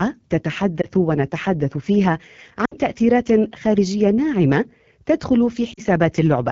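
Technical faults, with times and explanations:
Throughout, AMR wideband (HD Voice) codec: the encoder models speech up to 6.4 kHz with a pulse-excited vocal tract filter and fills the band above with shaped noise. The plainly rough, raspy texture fits a low mode around 8.85 kbit/s.
0.82–0.86 s, 2.65–2.75 s and 5.74–5.80 s, lost AMR speech frames: radio errors corrupted frames, so the decoder repeated the last good pitch and vocal tract settings at falling gain. The 20 ms gap gives a brief dip. The 40 and 60 ms gaps drop the speech to near silence before it returns rough, fitting two and three lost frames.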